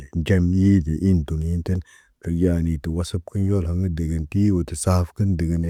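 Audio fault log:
No faults detected.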